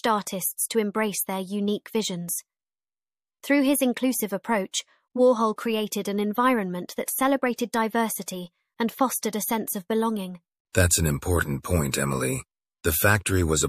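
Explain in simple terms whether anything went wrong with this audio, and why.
Eight times in this speech, a short hiss creeps in just ahead of a sharp sound and blurs its start: at 4.71 s (right after "his inclusive"), 5.56, 7.06, 7.56, 8.26, 10.72 (after "a sense of belonging"), 11.63 (after "an important") and 11.92 s. This is pre-echo. The compression works in chunks of about 36 ms, and it never switches to shorter chunks for sudden sounds. Its noise spreads roughly 16 to 23 ms before each attack.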